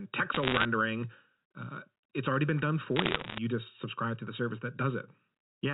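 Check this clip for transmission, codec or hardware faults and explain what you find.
Two faults are audible in this telephone speech. A fixed comb-filter colouring runs through the whole clip, and two short bursts of crackle come from bit errors on the digital line.

Channel delay (comb filtering) is present from start to end. One channel arrives roughly 0.7 ms late. When the two are summed to mono, components common to both cancel at evenly spaced frequencies. The first notch sits near 700 Hz. Further notches follow at about 2.1 kHz and 3.6 kHz, inside the 4 kHz telephone band. The speech sounds hollow and phasey. The notches stay fixed.

Bit errors on a digital phone line strike twice, from 0.34 to 0.65 s and from 2.96 to 3.38 s. Flipped bits corrupt individual samples. A flip in a high-order bit, or in the sign of a loud sample, throws a sample far off its true value. That produces a sharp tick. 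The rate is around one percent in the first burst and somewhat higher in the second. At these rates the ticks cluster into crackle over the speech.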